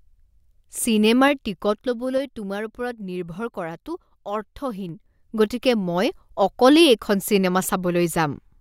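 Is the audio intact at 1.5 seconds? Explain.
No. At 1.5 seconds the speech carries a ticking, zipping texture as its level drops. This is zipper noise, running from 1.06 to 2.57 s, just before "ওপৰত নিৰ্ভৰ কৰাটো". The volume falls by roughly 10 dB, but in unsmoothed 3 dB jumps at about two per second rather than as a continuous slope. Each abrupt gain jump puts a small discontinuity into the waveform, and those clicks are what you hear as the zip.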